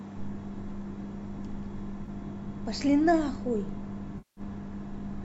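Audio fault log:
2.06–2.09 s and 4.18–4.41 s, AAC frame loss with concealment: the decoder lost audio, about 20 ms and then 190 ms (fitting roughly two and nineteen 10 ms low-delay frames, likely from AAC-ELD), and rebuilt it from the last good spectrum. The first gap leaves a brief smeared, noisy patch. The second decays toward silence, then fades back in.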